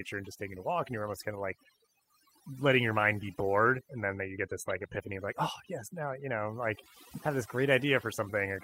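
Across the whole speech recording, overdone noise removal is audible. The reduction was set so aggressively that bands near the estimated noise floor are gated almost entirely, taking low-level speech detail with them. Pauses fall to near silence sprinkled with chirping artefacts.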